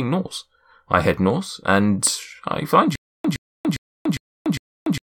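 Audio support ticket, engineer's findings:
Stutter with silent gaps from 2.96 s to end, after "north and I find": a 115 ms speech fragment repeats 5 times, each followed by about 290 ms of digital silence, cycling every 405 ms. Likely player or stream stall re-serving the last buffer; intervening speech lost.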